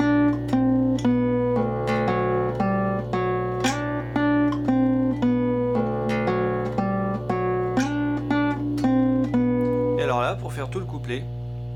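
From start to finish the clip carries mains hum, a steady low tone at 60 Hz with some low harmonics stacked above it. Power-line current has leaked into the signal path, through a ground loop or stray field from a nearby transformer, and rides underneath everything at a level only around 10 dB below the wanted sound. At that strength the drone is plainly audible and thickens the low end throughout.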